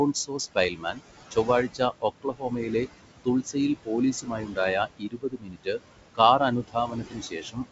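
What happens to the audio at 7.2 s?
At 7.2 s the sound falls inside a stretch of speech cut by the noise suppressor, running from 6.15 s to 7.59 s. The suppressor misjudges parts of the speech as steady background and pulls them down with the noise, by as much as about 19 dB at the deepest point. Across that span, roughly 0.7 s of material in total is affected: softer consonants and trailing parts of words come out faint or swallowed, as if they drop away mid-utterance.

This sits on top of noise suppressor artifacts present through the whole clip. The suppressor works frame by frame, attenuating bands it classifies as noise by about 20 dB. The room noise, about 11 dB below the speech, is therefore pushed down in the gaps and lets through under the speech.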